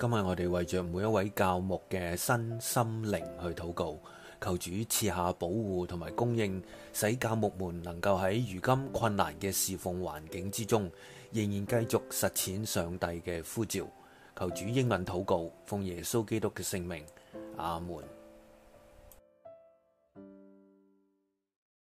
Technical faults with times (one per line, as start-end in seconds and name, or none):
none